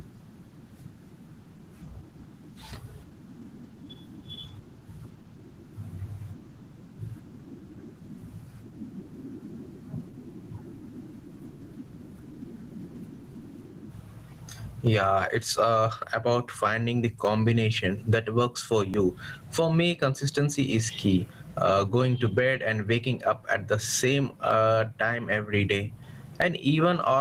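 From the start the whole clip has gain pumping. The level ducks by about 20 dB under each louder syllable, so the speech sounds squashed. That's likely the input gain set way too hot with a fast limiter clamping down.

At 18.94 s, right after "combination that works for", there's a dropped buffer (overrun). The speech skips ahead by just a few milliseconds, with no gap. Most likely the software didn't read that chunk in time and the hardware overwrote it.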